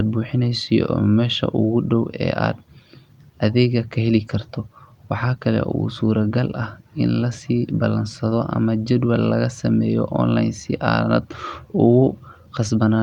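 No technical faults can be heard at any point in the recording.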